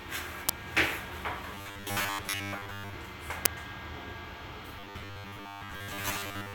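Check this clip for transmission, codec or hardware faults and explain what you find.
Two kinds of fault appear, each twice.

Uninitialised buffer at 0.49 s and 3.46 s: a loud crack about 5.8 ms long, consistent with a 256-sample block played before being filled.

Robotic sound from repeated short buffers from 1.55 to 2.95 s and 4.79 to 6.54 s: a rigid 100 Hz metallic buzz, likely from late buffers being covered by repeating 10 ms segments while most of the real sound is skipped.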